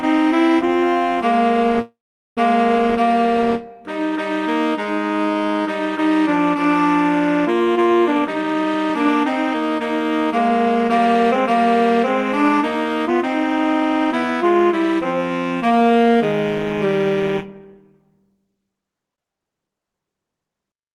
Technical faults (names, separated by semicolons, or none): call audio freeze; jitter buffer speed-up